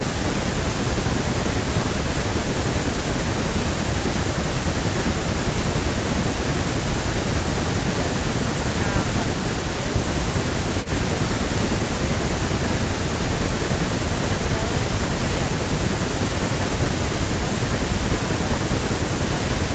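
No technical faults can be heard in this speech. It has nothing above 8 kHz, which fits a call codec running at wideband bandwidth after ordinary call microphone processing.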